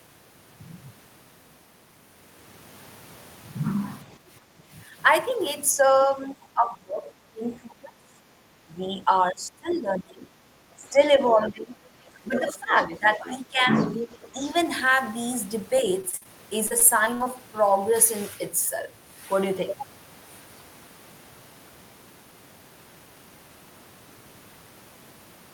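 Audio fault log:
4.18 to 4.62 s, background gated by the echo canceller: while the loudspeaker was active, the canceller clamped the microphone, so the room sound dips by about 9 dB for roughly a third of a second in total, then comes back once the canceller releases.
5.72 to 14.55 s, speech suppressed in double talk: the talker's voice keeps dipping, by as much as about 20 dB, for roughly five seconds in total. Most likely both sides were talking at once and the canceller pulled down the near talker together with the echo.
9.71 s, 10.86 to 11.51 s and 12.36 to 14.29 s, other side's voice leaking through: a second voice comes through, first as a brief scrap at about 25 dB below the speech, then at about 20 dB below, then a longer stretch only about 10 dB down. This is likely leftover loudspeaker echo that the canceller failed to remove.
16.01 to 16.27 s and 16.67 to 17.27 s, repeated packet loss (robotic sound): choppy stretches made up of four gaps and then five, the longest being 48 ms and 54 ms. 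Each hole is patched by stretching the last bit of sound, which covers about 44% of the first stretch and 25% of the second.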